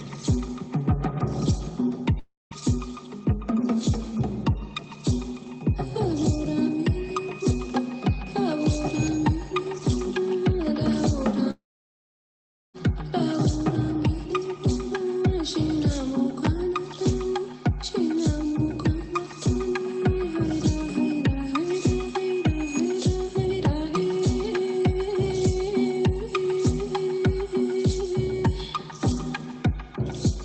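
At 2.19 to 2.54 s and again at 11.51 to 12.77 s, the sound breaks off. A fading buzz fills in, then near-silence. It's likely a long network dropout, losing about 0.32 s and then about 1.24 s before the audio resumes further along.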